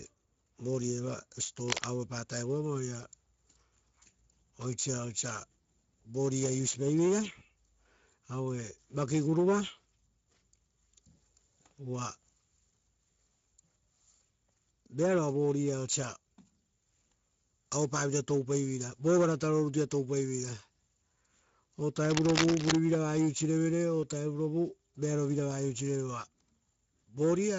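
From start to finish the speech sounds hoarse and grainy, with a hissy, smeared quality in place of crisp high frequencies. This is plainly audible Speex codec damage: the CELP coder has too few bits to describe the excitation, so the source signal turns noisy, and whatever sits above 4 kHz is rebuilt as shaped noise rather than real detail. The degree of damage fits a Speex setting of about 16.8 kbps.

At 1.68 to 1.84 s, and again for longer from 22.02 to 22.75 s, a dense, uneven crackling rasp cuts across the speech, reaching about the same loudness as the speech itself. This is cable scratch noise, likely from a worn cable, connector or control being moved. As the contact shifts, its resistance jumps rapidly, and those jumps add ragged bursts of noise that sound like scratching or rustling over the audio.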